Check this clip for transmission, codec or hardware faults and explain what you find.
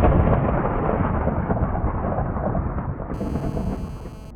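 There is one hardware fault here: GSM phone buzz, from 3.14 s to 4.31 s. A 2G handset close to the recording chain was transmitting in bursts about 217 times a second, and the audio circuitry rectified the radio pulses. The result is a hard, raspy 217 Hz buzz full of harmonics, sitting about 24 dB below the signal and unrelated to it. It is nearly steady, which fits a phone on an active call.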